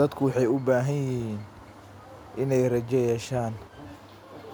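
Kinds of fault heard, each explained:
No technical fault can be heard anywhere in this speech clip. There is nothing to list for it under any kind of fault.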